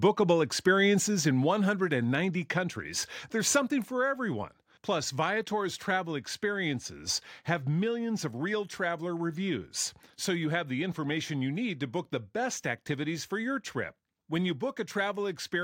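Microphone volume stepped down at 1.02 s and again at 2.04 s in this speech clip, just before "countries there's something": the voice and background drop suddenly, by about 4 dB then about 2 dB, likely from call software lowering the input gain in steps.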